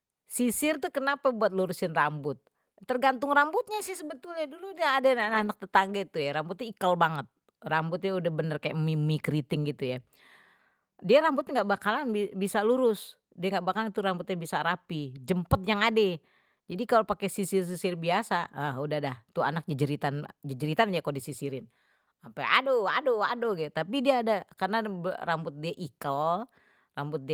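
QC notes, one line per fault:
5.17–5.47 s, lost packet rebuilt from error correction: Between "sebetulnye dulu udah ada" and "tetangga itu ya rambut" the speech turns briefly rough and grainy but never drops out. Eight separate lost packets were filled from the low-bitrate copies carried in the packets that followed. The decoder played those copies in place of the originals, so there is no gap. The rebuilt frames total about 160 ms and sound noisier than the speech around them.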